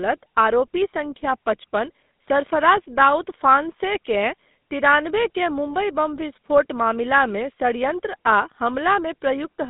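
Throughout the speech, the signal has passed through the GSM full-rate codec, which rebuilds the vocal tract from a filter model and drives it with a sparse, regularly spaced pulse excitation, consistent with its 13 kbps rate. The line band runs only from 200 Hz to 3.7 kHz, so the audio sounds thin and boxed-in with no top end, and the coarse excitation leaves a plainly audible buzzy, gravelly roughness.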